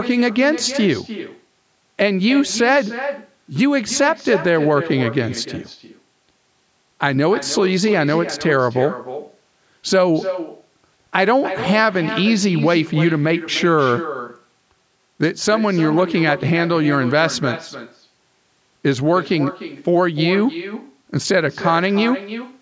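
Echo with no canceller runs through the whole of this speech recording: every phrase is followed roughly a third of a second later by a fainter, thinner copy sitting about 11 dB below the direct voice. The far end is playing the call over a loudspeaker, its microphone picks that playback up, and with nothing cancelling it the signal returns after the network round trip. The call's microphone processing, with nothing above 8 kHz, is working normally.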